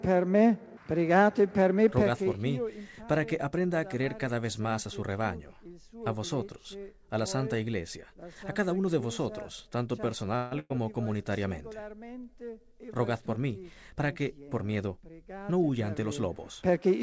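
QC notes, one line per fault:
10.36 to 10.53 s, call audio freeze. The sound stops moving forward and the last moment is stretched into a fading buzz or hiss for about 154 ms. It then picks up exactly where it left off. This likely comes from delayed packets draining the jitter buffer, so a gap is inserted and nothing is lost.
10.59 to 10.72 s, burst of packet loss. Right after the freeze, about 100 ms of audio goes missing. The receiver covers it with a held, decaying continuation of the last sound, with about 10 ms of silence. The audio then resumes later on, with the part in between missing.
13.74 to 15.31 s, jitter buffer speed-up. For about 1.6 s the sound runs roughly 10% fast while pitch stays the same, so it feels hurried. The receiver trims many tiny pitch-length pieces to shed excess buffered delay. Around 150 ms is dropped in total.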